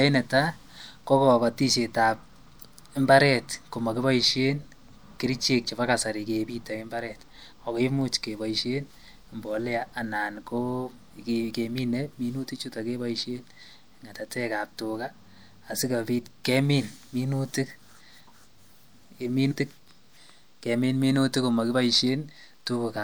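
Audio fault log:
7.51 s and 19.50 s, compressed frames skipped: the speech leaps ahead just before "ako imuuch kebaisheen mbolea" and again at 19.50 s. The gaps are roughly 50 ms and 150 ms, which fits two and five missing 26.1 ms frames.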